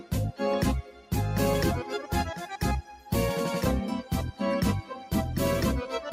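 The sound pumps and thins out throughout, with sustained parts and decays sinking while sharp onsets mostly come through. The level swings by around 10 dB as held material is pulled down and then released. This is a noise suppressor applied to music or sounds: a processor built for speech treats steady tones, ambience and reverb tails as noise and attenuates them, leaving attacks mostly intact. Three deeper dips stand out where the sound is cut by the noise suppressor: 0.82 to 1.12 s (about 12 dB down), 2.82 to 3.10 s (about 10 dB) and 4.82 to 5.12 s (about 8 dB). Each lasts roughly a third of a second. In these spans the suppressor judged the ongoing sound to be noise and clamped it harder than the surrounding material, so the sound drops away or its decay is chopped short before level returns.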